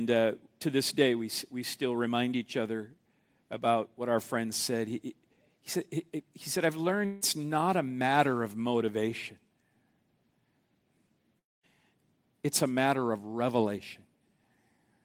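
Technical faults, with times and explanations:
7.05–7.23 s and 11.39–11.65 s, long network dropout: a 160 ms gap between "he he said I've" and "not a matter of" is filled by a fading continuation of the last sound. A 240 ms gap fades into 220 ms of silence. Likely lost packets, with the missing audio never recovered.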